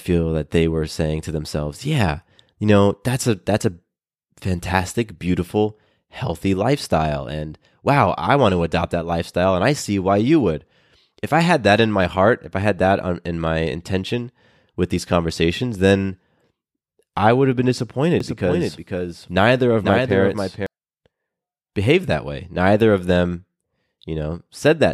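Right after "I would have been", from 18.20 to 20.66 s, there's a doubled audio track: a full-band copy of the speech trails about half a second behind, roughly 5 dB down, dry and switching on and off abruptly, likely a second capture path or misaligned edit.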